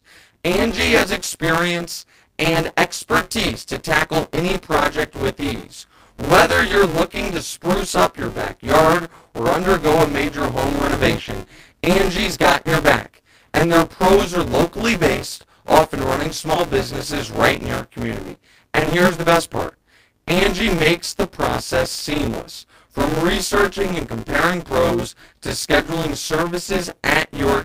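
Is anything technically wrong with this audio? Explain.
Yes, there's buffer tearing running through the whole clip. The writer and the hardware reader have drifted, so roughly 40 percent of each buffer replays speech from about 20 ms earlier, hard-joined on both sides. That gives a rattly robotic buzz near 172 Hz whenever speech is present, which fits a 256-sample buffer.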